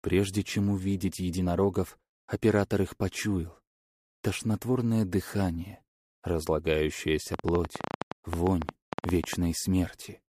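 Likely interference or a faulty connection injects a train of clicks from 7.34 to 9.34 s, about twenty similar pops at an uneven 11.1 per second, ticking well above the sound.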